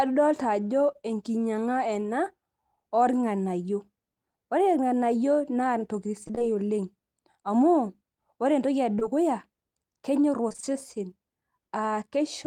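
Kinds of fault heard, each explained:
Repeated packet loss (robotic sound): The call's packets failed to arrive again and again in quick succession, and each missing piece was patched by extending the sound just before it. From 6.23 to 6.44 s five gaps, the longest 22 ms, left about 100 ms missing and 88 ms patched, nearly half the stretch. From 10.49 to 10.74 s four gaps cost about 80 ms, again close to half. The speech there turns choppy, with pieces dropping out.
Short concealed packet loss: Two brief runs of the stream, about 20 ms each, reached the decoder too late, back to back from 8.95 to 8.99 s and 8.99 to 9.03 s. The receiver bridged each hole by carrying the preceding sound forward, keeping its pitch where it was voiced and using shaped noise where it was not, then faded back into the real signal. The speech shows a short smear or wobble, and a quick consonant there can disappear.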